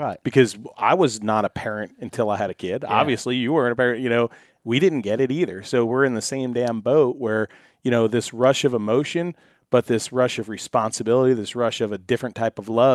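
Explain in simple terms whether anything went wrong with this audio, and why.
No problems can be heard anywhere in this speech.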